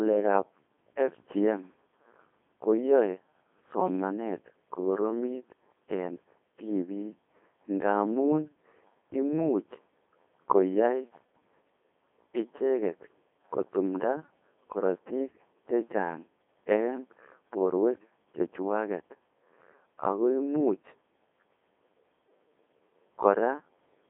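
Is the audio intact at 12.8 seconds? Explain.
No. At 12.8 seconds, as throughout the clip, the speech carries Codec 2 vocoder damage. The decoder rebuilds the voice from sine waves driven by pitch, voicing and spectral-envelope data, so the sound is robotic and buzzy, confined to roughly 250 Hz to 3.6 kHz with nothing above 3.8 kHz. The heavy damage fits a 2.4 kbit/s mode.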